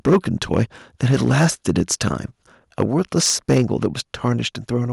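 From 0.06 to 0.17 s the loudest peaks break into a harsh, crackly edge: microphone overload, with the input likely driven about 8 dB past the converter's limit, so a sizeable share of samples is flattened. The waveform shows squared-off, flat-topped peaks, and the spectrogram shows bright vertical smears of added harmonics. At 0.14 s, within that burst, the whole level drops by about 2 dB in one step. This is the microphone volume stepped down, likely the call software reacting to the clipping. It appears as a clean, sudden shrink in waveform height and a slight dimming of the spectrogram, covering both the voice and the background. Overload returns at 0.53 to 0.62 s (about 7 dB over), 1.03 to 2.08 s and 2.8 to 3.86 s (both about 8 dB over), with fewer peaks flattened than at the start. A second 2 dB step down comes at 3.54 s. A last, faint overload, about 1 dB over, runs from 4.24 to 4.3 s.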